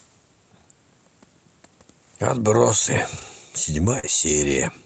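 At 3.17 to 3.23 s, a lost packet rebuilt from error correction. About 40 ms was lost, which points to two 20 ms packets. The following packets carried low-bitrate copies, and the decoder played those instead. Nothing drops out, but the sound turns briefly rougher and noisier.

At 3.99 to 4.05 s, a short concealed packet loss. About 40 ms arrived too late. The decoder extended the preceding sound for about 37 ms, then blended back. It comes across as a brief smear or wobble.

Overlapping its end, 4.03 to 4.05 s, another 20 ms is rebuilt from error correction. This adds a moment of the same coarse, noisy texture before the audio recovers.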